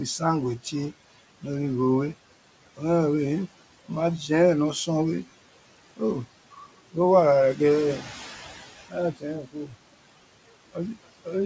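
Speech recorded over room noise sitting about 17 dB below the voice, carried through a call path with nothing above 8 kHz, which fits a wideband G.722 codec. Noise suppressor artifacts run through the whole clip. The suppressor pulls steady-noise bands down by about 17 dB frame by frame, so the background sinks in the gaps and comes back up under the voice.

There are also four places where speech is cut by the noise suppressor. The suppressor mistakes low-level speech energy for noise and attenuates it along with the background, so parts of the speech sound swallowed or faint. The cuts fall at 6.51–6.65 s (about 13 dB), 7.99–8.11 s (about 7 dB), 9.13–9.24 s (about 15 dB) and 9.42–9.75 s (about 17 dB). In each, roughly a tenth of a second is affected, about twice that in the last.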